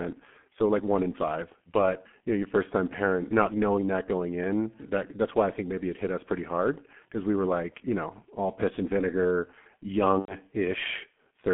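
Throughout the clip, the speech has passed through the G.723.1 codec, a low-rate telephony coder working in 30 ms frames. Heavy coding damage points to a rate near 6 kbit/s. The line passes only about 150 Hz to 3.5 kHz, and the coder's slowly updated voice model smears rapid changes. The speech therefore sounds muffled and hoarse, with consonants blurred and little crispness at any point.

From 10.20 to 10.37 s, VoIP packet loss concealed by the speech codec cuts into the audio. Packets went missing, and the decoder filled the gap of about 90 ms, which fits three lost 30 ms frames, by extending its last pitch and filter settings with gain dropping each frame. The speech stretches into a buzzy tone or coloured noise that fades, and because each frame builds on the previous one, it stays weak or distorted briefly after the packets resume.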